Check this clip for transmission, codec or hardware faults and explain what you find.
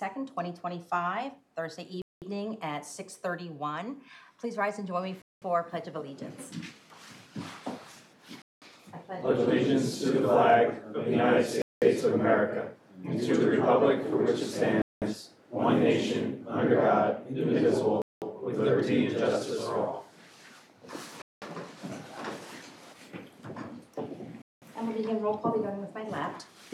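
One fault turns up repeatedly: a gap between chunks. Silent holes begin at 2.02, 5.22, 8.42, 11.62, 14.82, 18.02, 21.22 and 24.42 s. Each lasts 200 ms. The audio arrives in 3-second chunks, and a stretch of silence sits between each pair. No sound is lost. The flow simply stops and restarts. You hear short dropouts every 3.2 seconds, a steady stutter through the whole clip.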